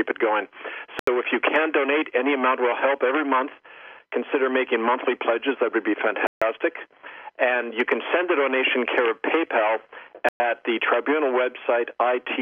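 At 0.99 s the audio drops to silence for 80 ms, then returns. The same dropout recurs at 6.27 s for 146 ms and at 10.29 s for 114 ms. Each gap is a clean cut to silence with no fade, and playback resumes abruptly. These are likely Bluetooth stalls: radio interference delayed packets, the receiver's buffer emptied, and output halted until retransmitted data arrived.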